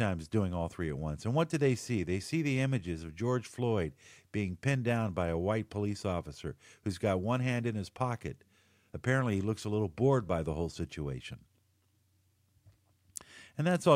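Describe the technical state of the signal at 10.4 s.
At 10.4 s the speech signal is intact, with no audible technical fault at that moment.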